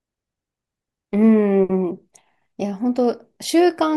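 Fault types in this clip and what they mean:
No fault types are present in this clip.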